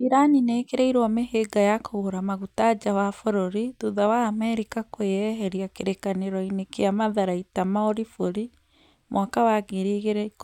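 Nothing goes wrong anywhere in this bit of speech, so there's no technical fault to point to at any moment.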